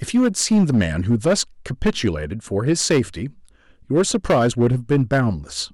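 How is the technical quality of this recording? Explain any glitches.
The recording is compromised by hard clipping across the whole speech clip. The signal is driven about 10 dB beyond what the stage can pass, so roughly one sample in twenty is flattened at the ceiling. Those squared-off peaks generate high harmonics, heard as harsh fuzz on louder syllables throughout.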